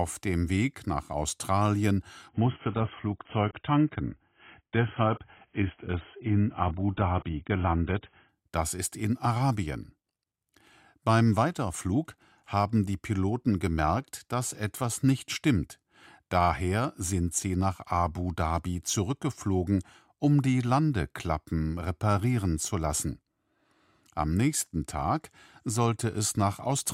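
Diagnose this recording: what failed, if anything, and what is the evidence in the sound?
The failure sits at the network stage, where the delivery rate fell. At 2.29 s the sound abruptly turns dull and thin, with no gap in playback. Nothing remains above 3.7 kHz, and coding artefacts rise. At 8.29 s full treble returns just as suddenly. This is an adaptive stream at a lower bitrate. For six seconds the player swapped to a leaner encoding, which fits a drop from 96 kbit/s to 16 kbit/s AAC.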